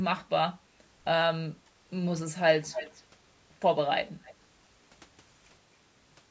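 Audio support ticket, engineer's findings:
Echo leak, 2.71–3.03 s: delayed copy of the speech trailing the talker by 268 ms, fairly strong at about 10 dB below the direct signal. Likely cause: far end on loudspeaker, echo canceller letting residual through. Spectrogram shows duplicated harmonic striations offset 268 ms. Waveform shows a ghost envelope after each burst.

Echo leak, 4.08–4.35 s: same 268 ms offset, much fainter at about 25 dB down. Faint smeared trace on the spectrogram, barely visible on the waveform. Band-limited to 8 kHz by the call microphone path.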